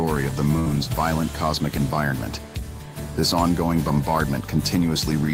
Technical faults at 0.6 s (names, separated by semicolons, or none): burst of packet loss